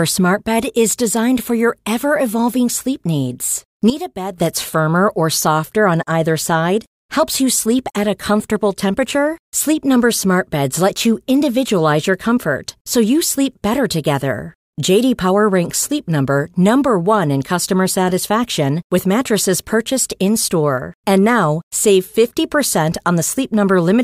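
A digital gain change, likely applied in a single sample step with no ramp, drops the level by about 10 dB from 3.9 to 4.38 s, right after "ever evolving sleep needs", a sudden gain jump that pulls speech and background noise down together until "that's firmer or softer".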